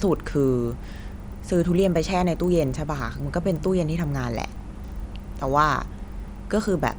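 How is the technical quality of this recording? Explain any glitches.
The speech is marred throughout by one fault: the resampler restarted on every block. Each 40 ms block was converted separately, likely from 24 kHz to 48 kHz, so every block edge carries a small error, heard as a steady 25 Hz tick-buzz riding only on the speech.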